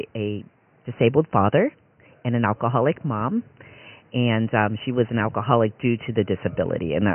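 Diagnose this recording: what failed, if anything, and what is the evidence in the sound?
Nothing failed in this recording.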